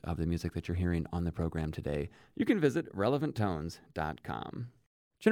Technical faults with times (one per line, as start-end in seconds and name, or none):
none